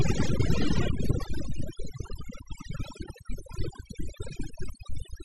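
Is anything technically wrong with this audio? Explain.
Yes. Overdone noise removal runs through the whole clip. The noise reduction stage was set far too aggressively, so it cuts individual frequency bands almost to nothing whenever they sit close to its estimate of the noise. The quieter parts of the speech fall below that threshold and are removed along with the noise. What remains is a lowered background dotted with twinkling specks.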